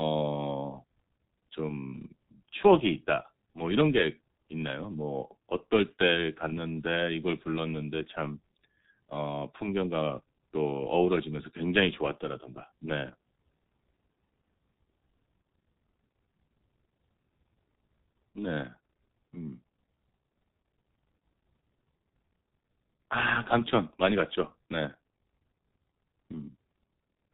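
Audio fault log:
Throughout: G.723.1 codec, heavy damage; at about 6.3 kbit/s with 30 ms frames and nothing above 4 kHz, speech turns muffled and hoarse, consonants smeared.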